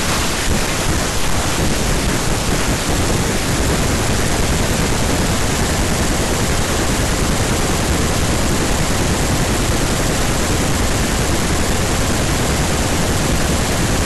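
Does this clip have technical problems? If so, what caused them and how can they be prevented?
Yes. Hard clipping runs throughout. The speech was driven about 11 dB past full scale, so around 7 percent of samples get sliced flat, and those flat tops throw off high harmonics heard as harsh fuzz on loud passages. Set input gain lower to leave headroom for peaks.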